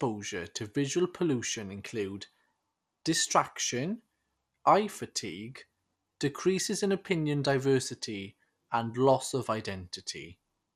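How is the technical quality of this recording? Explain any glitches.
The technical quality is compromised by plainly audible lossy coding for the whole clip. The speech sounds dull, with nothing above 15.1 kHz, and carries a gurgling, granular texture. This is likely MP2 compression at a low bitrate, near 80 kbps, starving its sub-bands so upper bands drop out or flicker and the remaining ones are coarsely quantised.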